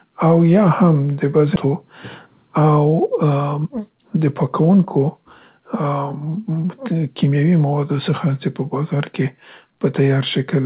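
It's a speech clip that came through a call path using G.711 A-law at 64 kbps, so nothing reaches above 4 kHz. At 1.56 s there's a skip ahead. Roughly a second of audio just vanishes and the two sides are butted together with no gap or fill, so the speech lurches forward mid-flow. That's a chunk dropped either on the way or by the jitter buffer when it overflowed, while newer audio was already queued. Then there are two stretches of jitter buffer speed-up, where the buffer was holding more audio than it wanted and trimmed small pitch-period-sized slices, over and over, to catch up. From 3.23 to 5.59 s the speech runs at about 113% and loses around 300 ms in total. From 6.04 to 7.72 s it runs at about 109% and loses around 150 ms. In both stretches the pitch holds steady, but the talker sounds noticeably hurried.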